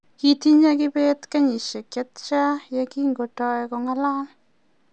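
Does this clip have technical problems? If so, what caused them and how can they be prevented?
No, nothing in this speech recording points to a technical fault, so there is nothing here to trace or prevent.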